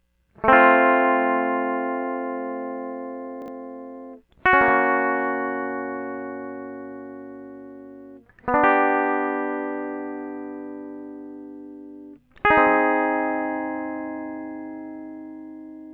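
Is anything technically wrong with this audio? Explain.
Yes. Around 3.42 to 3.48 s the music briefly jumbles, a case of chunks out of order. A 20 ms chunk of audio was delivered late and plays two chunks after its proper place. No sound is missing, but the sequence is scrambled for about 60 ms. The rearrangement leaves three hard joins where the waveform doesn't line up. The result is heard as a momentary garbled stutter in the music.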